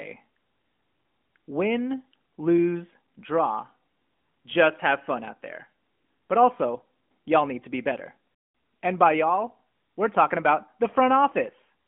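No technical faults can be heard in this speech.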